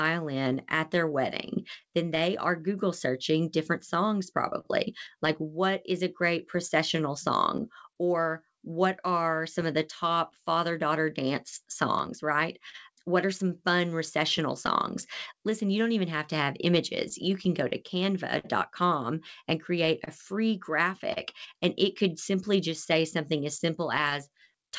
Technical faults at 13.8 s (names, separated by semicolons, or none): clock drift between sender and receiver; repeated timing corrections; scattered short gaps